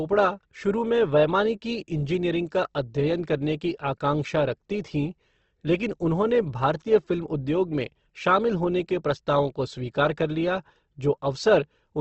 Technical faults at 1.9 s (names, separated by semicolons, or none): Opus compression